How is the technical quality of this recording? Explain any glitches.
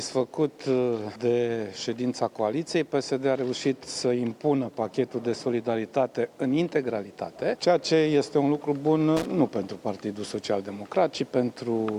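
One glitch stands out. From 9.17 to 9.26 s there is a burst of loose connector crackle lasting about 90 ms. A worn or dirty contact was intermittently opening and closing, chopping the signal and adding pops from any DC on the line, heard as irregular scratchy crackle.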